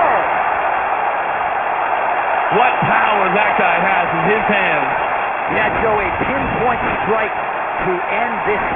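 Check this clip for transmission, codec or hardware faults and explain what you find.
One fault runs through the whole clip: aliasing. Content that lay above about 3 kHz folds back below it as gritty, metallic false tones, roughly 10 dB under the real sound. This fits a drop to a 6 kHz rate, made without first filtering off the content above that 3 kHz limit.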